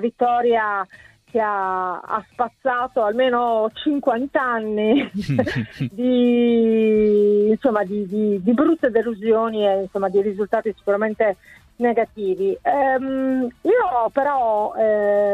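No technical faults can be heard anywhere in the audio.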